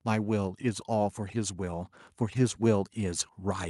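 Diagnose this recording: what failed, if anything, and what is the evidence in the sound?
Automatic gain rising in the call processing: from 0.05 s to the end at 3.69 s, speech and background swell together as the AGC keeps lifting gain on quiet input.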